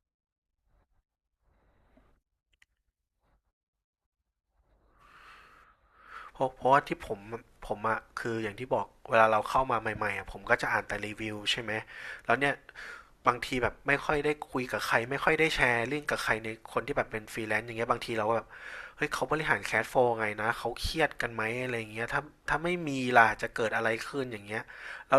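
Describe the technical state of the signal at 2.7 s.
The audio at 2.7 s is intact, with no fault audible at that moment.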